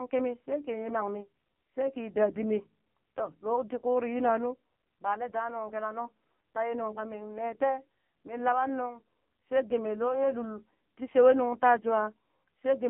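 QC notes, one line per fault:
Throughout, AMR narrowband mobile codec: the speech sounds thin, buzzy and synthetic, with nothing above about 3.6 kHz and little below 150 Hz, so sibilants lose their edge and the voice sits inside a telephone band of roughly 150 Hz to 3.4 kHz. AMR-NB rebuilds each 20 ms frame from a vocal-tract model driven by a few pulses, and the heavy coding damage points to one of its lowest modes, around 5.9 kbps.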